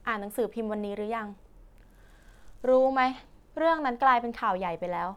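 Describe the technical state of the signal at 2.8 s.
At 2.8 s the speech signal is intact, with no audible dropout, distortion, clipping or other technical fault.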